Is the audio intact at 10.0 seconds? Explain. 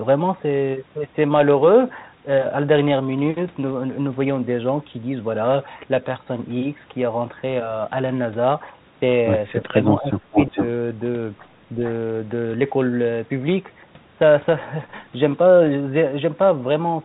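No. Speech suppressed in double talk: an echo canceller likely mistook overlapping talk for echo, dipping the speech about 20 dB between 10.0 and 10.58 s.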